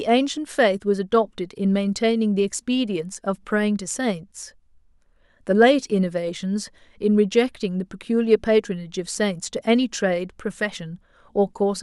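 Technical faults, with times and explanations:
No technical faults detected.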